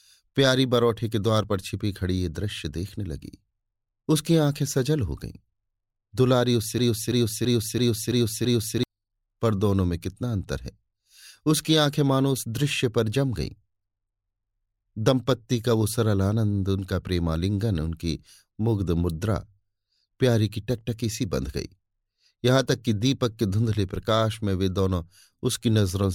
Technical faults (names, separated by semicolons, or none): broken-record loop